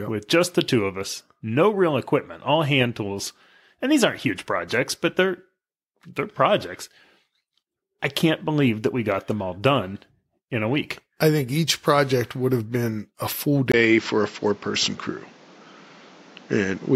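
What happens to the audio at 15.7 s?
At 15.7 s the recording is still on what is likely a poorer input device, an input switched to a poorer device from 13.72 s to the end. After a 20 ms silence, the speech loses everything above 7.6 kHz, sounds duller, and carries a faint new noise floor roughly 30 dB below the speech, with the overall level roughly unchanged.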